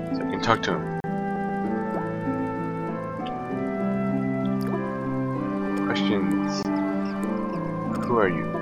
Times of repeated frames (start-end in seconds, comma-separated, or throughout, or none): 1.35-1.61, 7.96-8.04